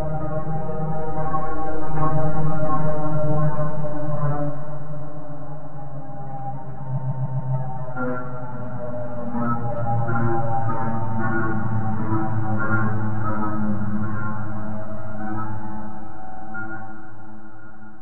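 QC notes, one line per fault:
6.97–7.53 s, repeated frames: a 139 ms block plays four extra times, a stutter at a steady rate. Unlike an echo, the copies don't fade or overlap. Each is an exact, full-level replay, and together they add 0.56 s to the clip, which fits a run of about six compressed frames being resent.
16.23–16.42 s, repeated frames: a shorter 46 ms block replays four extra times, a fast stutter that adds 0.19 s.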